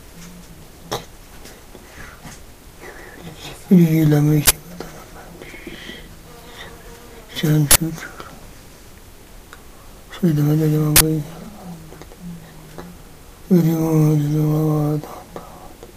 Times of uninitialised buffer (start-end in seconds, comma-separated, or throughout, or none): 4.46-4.50, 7.71-7.76, 10.96-11.01